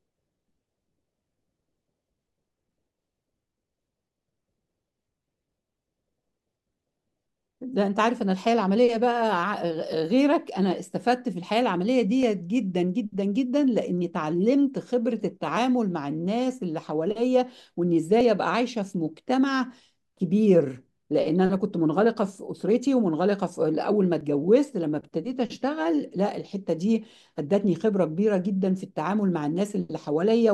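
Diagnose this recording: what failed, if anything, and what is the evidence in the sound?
Overlap between stream segments at the network stage: tiny skips at 12.23, 18.21 and 24.21 s, six seconds apart, where overlapping segment boundaries were trimmed, removing a few milliseconds.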